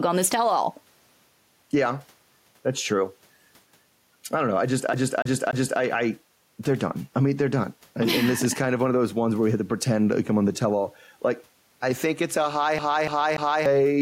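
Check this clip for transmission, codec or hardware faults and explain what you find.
Two faults stand out in this speech: gain pumping that runs through the whole recording, and two stretches where the playback sticks like a skipping CD.

Gain pumping, throughout: the level swings by around 5 dB. The likely cause is input gain set far too high for the microphone, with a fast limiter or compressor clamping down on every loud peak and releasing in the quiet gaps. The room noise sits far below the speech, and the speech itself sounds squashed, with loud and soft syllables pressed close together in level.

CD stuck on one turn, at 4.93 to 5.80 s and again at 12.79 to 13.66 s: each time, a 0.29 s slice of audio plays three times in a row, with a brief mute at each jump back. This is the pattern of a scratch making the laser fall back one track at the same point on every revolution of the disc. 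It produces the quick, evenly spaced stutter typical of a skipping CD, and both episodes repeat the same loop length.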